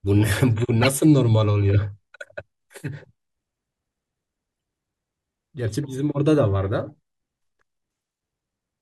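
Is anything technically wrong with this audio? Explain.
Yes. A harsh chirp-like burst cuts through the speech from 0.82 to 0.87 s, and a much fainter blip follows at 6.89 s. Both are corrupt frames decoded: flipped bits in a few compressed frames made the decoder misplace energy across the spectrum, for roughly those frames' length.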